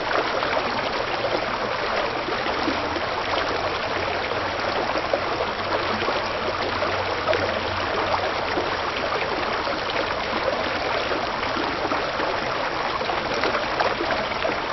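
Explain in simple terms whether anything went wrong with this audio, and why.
Nothing went wrong here.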